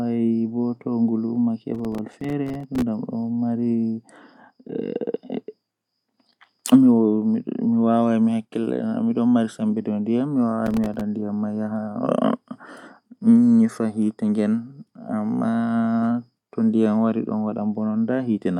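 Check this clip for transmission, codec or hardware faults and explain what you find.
Processor overload crackle occurs twice, from 1.75 to 2.82 s and from 10.66 to 11.01 s. The processor missed many buffer deadlines again and again, each leaving a short silent gap, consistent with buffers of about 3 ms. The speech breaks into gritty crackle until the load passes.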